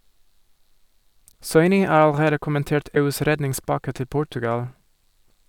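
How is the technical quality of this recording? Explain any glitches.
Two short glitches interrupt the speech. At 1.31–1.33 s and 2.94–2.97 s, a likely broken MP3 bit reservoir leaves frames after a cut decoding borrowed bytes from the wrong frame, so the audio jumps ahead with a brief 24–28 ms garble.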